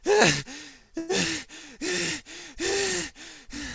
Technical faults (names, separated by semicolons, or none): call audio freeze